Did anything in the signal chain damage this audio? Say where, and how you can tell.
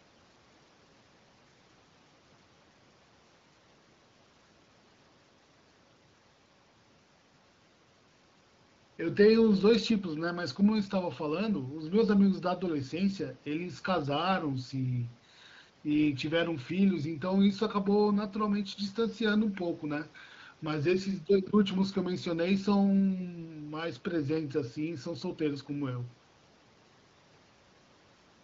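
No, nothing in the signal chain damaged this speech; its only coloration is the light, expected character of the AMR wideband (HD Voice) codec at a rate consistent with the 15.85 kbit/s mode.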